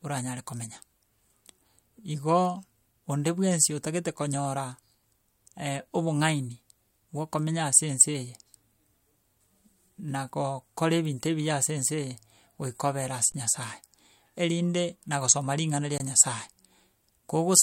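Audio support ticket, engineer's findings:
Underrun with held sample at 13.32–13.34 s after "goika obere" and 15.98–16.0 s after "na gosoma ring'ana ria": 20 ms flat stretches, output buffer starved, converter holding its last value. No audio lost, so playback resumes softly, unlike a zero-level dropout.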